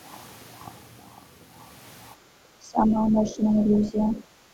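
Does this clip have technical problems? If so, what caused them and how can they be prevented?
Yes. From 2.16 to 2.30 s the room background dips by about 8 dB. This is background gated by the echo canceller. The loudspeaker was playing, so the canceller pulled the microphone down briefly. A gentler suppressor setting or a quieter loudspeaker prevents it.

From 2.58 to 4.23 s the talker's speech is pushed down, at worst by roughly 25 dB. This is speech suppressed in double talk. Both sides were likely talking at once, and the canceller turned both down. Better double-talk detection, or a headset, prevents it.

The other side's voice leaks through in three short scraps: 3.26 to 3.35 s, 3.75 to 3.85 s and 4.02 to 4.16 s. These scraps sit around 20 to 25 dB below the speech. The likely cause is echo the canceller failed to remove. Headphones instead of a loudspeaker prevent it.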